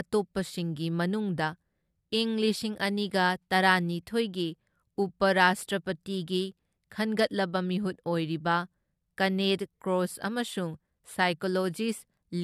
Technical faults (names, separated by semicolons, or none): none